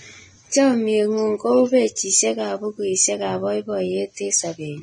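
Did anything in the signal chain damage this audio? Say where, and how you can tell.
Yes, at the codec stage. Throughout the speech nothing comes through above 9.7 kHz, and the treble below that edge is hissy and grainy, with consonant attacks smeared and tones roughened. A plain low-pass filter or resampling would give a clean, quiet top end. Here the detail is swapped for noise of similar energy, which points to heavy damage from the likely cause, Vorbis compression at a low rate that fits roughly 20 kbps.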